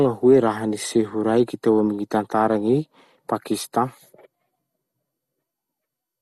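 From start to finish the speech sounds dull and gurgly, with a grainy, watery edge that's clearly audible, and nothing gets through above about 12.2 kHz. That's most likely MP2 compression. Layer II splits the signal into 32 sub-bands and shares out a bit budget between them. Here there weren't enough bits, which points to a low rate of around 64 kbps, so the top bands got switched off entirely and the remaining ones were quantised coarsely.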